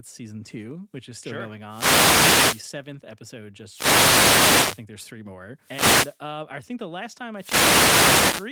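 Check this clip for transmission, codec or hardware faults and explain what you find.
The speech has four wireless microphone noise hits, at 1.66–2.70 s, 3.67–4.85 s, 5.59–6.22 s and 7.34 s to the end. Each time, the FM radio link fades as reflected paths cancel the signal, so receiver noise rises, heard as a swish or burst of static.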